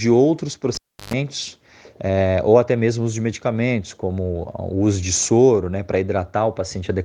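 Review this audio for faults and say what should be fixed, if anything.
A cable pulled and plugged in runs from 0.75 to 1.14 s. A pop marks the connector leaving the socket, then the signal drops to near silence for about 340 ms. As the plug goes back in, only its tip makes contact at first, so the unshielded conductor picks up a roughly 120 ms burst of 50 Hz mains buzz before the ground seats and a second pop brings the sound back. To prevent it, secure the cable run and mute or fade the channel before touching any live connection.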